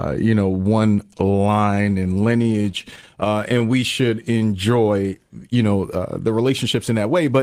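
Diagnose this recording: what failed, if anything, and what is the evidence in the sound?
Repeated stalls (stutter) from 1.07 to 3.63 s: the network delivered packets late, the jitter buffer kept running dry, and the receiver bridged 41 short gaps, none longer than 20 ms, by continuing the last sound. That filled about 431 ms, roughly a sixth of the span, so the speech drags and stutters without losing anything.

Jitter buffer slow-down from 3.66 to 4.57 s: to rebuild its reserve, the receiver repeated pitch periods over and over, adding 118 ms. The speech runs at 88% speed at unchanged pitch, and sounds are drawn out.

Jitter buffer speed-up from 6.50 to 7.39 s: with too much audio queued, the receiver trimmed short pitch-period pieces, removing roughly 70 ms. The speech runs at 107% speed at the same pitch and sounds slightly hurried.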